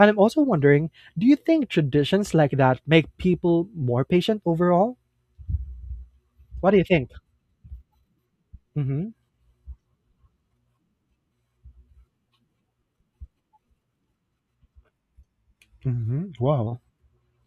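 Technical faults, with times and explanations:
14.85 to 16.67 s, section at the wrong speed: the speech suddenly drags and drops to a deeper register, running at 0.893 times normal speed and sitting about two semitones low, then snaps back. The likely cause is this stretch being played against the wrong clock, so pitch and tempo shift together. On a spectrogram the harmonic stack and formant bands step downward and syllables stretch wider; the waveform shows longer, more spread-out bursts.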